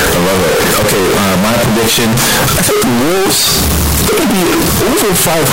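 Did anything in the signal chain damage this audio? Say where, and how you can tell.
Yes, in sample-format conversion. The whole speech clip is harsh, squared-off at a high, nearly fixed level, with noise as loud as speech but pitch intact. That's float read as integer, likely 32-bit float samples taken as 32-bit integers, so sign and exponent bits dominate.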